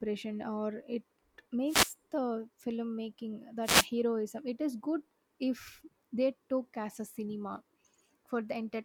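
The radio link from an analogue FM wireless microphone fades twice as reflected signals cancel at the receiver, letting its noise rise. Each wireless microphone noise hit sounds like a brief swish of static. The first runs from 1.66 to 1.93 s, just before "the filmmaking." The second runs from 3.62 to 3.88 s, right after "the filmmaking." Each burst lasts roughly a quarter of a second.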